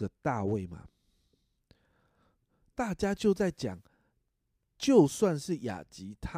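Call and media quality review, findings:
Nothing stood out on listening to the speech.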